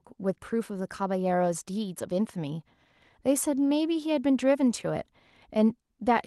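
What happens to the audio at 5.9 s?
Nothing goes wrong at 5.9 s; the speech carries on intact through that moment.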